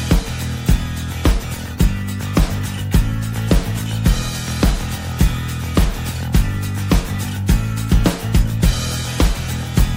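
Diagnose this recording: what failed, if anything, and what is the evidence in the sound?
The failure sits at the codec stage and runs the full length of the recording, with plainly audible damage throughout. The sound has a watery, swirling texture, and sharp attacks come out smeared. The likely cause is MP3 compression at a bitrate starved enough to fit roughly 64 kbps. Short of bits, the encoder drops weak spectral lines, which then flicker in and out between frames.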